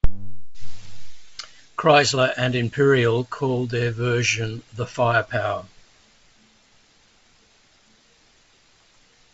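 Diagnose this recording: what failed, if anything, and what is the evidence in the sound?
Nothing has failed: the speech comes through the G.722 wideband telephone coding path at 64 kbit/s, keeping the band up to about 7 kHz, with coding traces faint at most.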